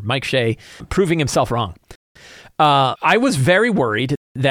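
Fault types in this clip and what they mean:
Gap between chunks: The speech stops dead for 200 ms twice, from 1.96 to 2.16 s and again from 4.16 to 4.36 s. The breaks come after every 2 seconds of speech, which fits audio delivered in 2-second chunks with silence inserted at each join. Nothing seems to be cut from the speech; it is pushed later and interrupted.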